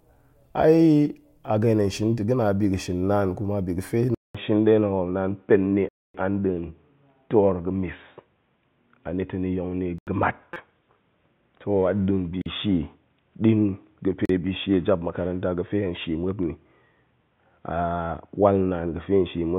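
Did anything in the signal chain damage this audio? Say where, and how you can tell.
Yes. At the capture stage, the input likely switched to a poorer device at 4.15 s. After a 200 ms silence, nothing above 3.8 kHz survives through to the end, and a new noise floor about 45 dB down appears. The level stays roughly the same, but the sound turns dull and boxy.

In the driver or buffer stage, blocks of digital silence replaced the signal at 5.89–6.14 s (256 ms), 9.98–10.07 s (85 ms, which fits a 4096-sample block), 12.42–12.46 s (43 ms) and 14.25–14.29 s (39 ms). Each one is a hard hole in the sound.

Also in the buffer stage, a repeated buffer at 10.54–10.56 s replays a 5.8 ms piece four extra times, which fits a 256-sample buffer. About 20 ms of new audio is lost, and the hard joins are heard as a brief buzzy stutter.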